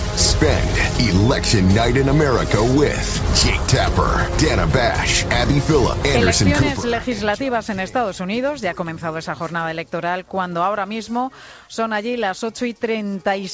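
No faults heard; the audio comes through a call path with nothing above 8 kHz, which fits a wideband codec such as G.722.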